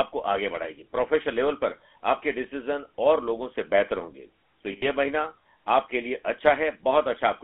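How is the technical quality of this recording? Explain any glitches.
The speech has clearly been through a narrowband phone codec throughout, with one brief dropout.

GSM full-rate codec, whole clip: the audio was coded by the original GSM speech codec, consistent with its 13 kbps rate, and squeezed into a 300 Hz to 3.4 kHz band, so it sounds muffled, buzzy and gravelly.

Lost GSM frames, 4.72 to 4.85 s: about 100 ms of coded audio went missing, consistent with five 20 ms frames. The decoder repeated its last good frame, so the sound hangs on as a short, rough metallic ring before resuming.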